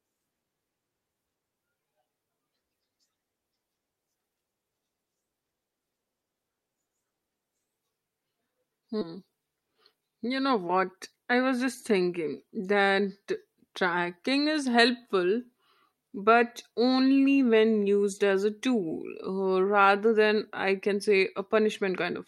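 At 9.01 s the speech has a skip ahead: about 0.4 s of audio was discarded while later audio was already queued, so playback jumps forward with no gap. The waveform shows an abrupt splice, and spectrogram harmonics break and resume misaligned.

From 9.61 to 10.02 s a jitter buffer speed-up removes roughly 50 ms of audio by cutting repeated pitch-period pieces, making the speech run at 111% speed at unchanged pitch and sound hurried. Syllables appear compressed in time, with tiny periodic seams.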